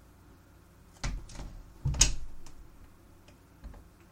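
No technical faults are audible.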